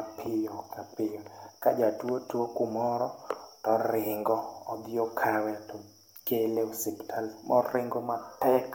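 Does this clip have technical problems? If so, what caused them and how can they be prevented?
No, there are no technical problems to report in this clip. With nothing going wrong, there is no cause to trace and nothing to prevent.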